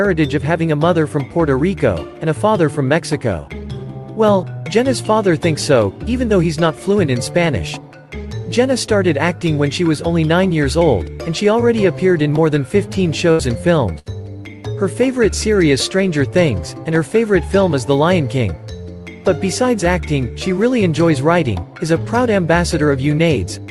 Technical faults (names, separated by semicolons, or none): burst of packet loss